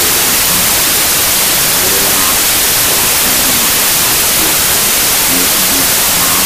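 From start to finish the audio is buried under loud, harsh noise, with the underlying sound faintly audible inside it, running at half speed and pitched down by an octave. This is a wrong sample width fault: data written as 32-bit integers are being read as 16-bit. Each original sample splits into two values, doubling the count and halving the speed; the upper halves keep the signal's top bits, while the lower halves decode as noise.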